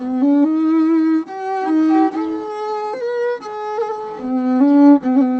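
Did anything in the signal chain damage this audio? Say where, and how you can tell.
No, nothing in the chain damaged it; the top end stopping at about 8 kHz is simply the normal bandwidth of the Opus call path it passed through.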